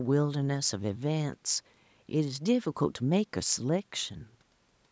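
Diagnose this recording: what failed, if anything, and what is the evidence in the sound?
Nothing in the speech points to a failure at any stage: the band stopping at 8 kHz and the missing lowest bass are what normal call microphone processing leaves behind, and the room noise stays about 44 dB below the speech.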